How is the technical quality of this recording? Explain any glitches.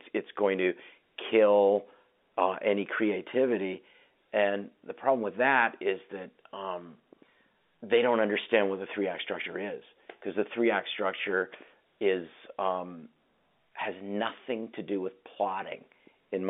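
No glitches here at all; it's ordinary telephone-line audio that keeps to a narrow band of roughly 250 Hz to 3.6 kHz, and nothing goes wrong along the way.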